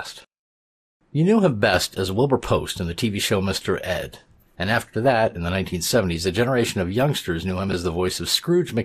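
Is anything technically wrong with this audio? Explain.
Yes, there are three faults.

Throughout the speech the sound is dull and band-limited, with a gurgling, granular roughness on top. The pattern is plainly audible and is likely MP2 compression at a low rate, with something around 80 kbps fitting what is heard. MPEG Layer II divides the spectrum into 32 sub-bands and shares out a fixed bit budget among them. Here the budget is too small, so upper bands drop out or flicker, and the remaining bands are coarsely quantised.

From 4.10 to 4.13 s, immediately before "and after that in", there is a short burst of burbling: DAB burbling. Bit errors slipped past error correction into the MP2 data, at a low rate of a small fraction of a percent. Corrupted samples put short blips of noise into single sub-bands. Three frames were damaged.

Between 7.69 and 7.73 s the audio briefly jumbles: chunks out of order. 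A segment of about 11.6 ms reached the output roughly three chunks late and played after the material that should have followed it. No audio is lost, but the sequence is wrong, and the three hard joins this creates produce the momentary garbled quality.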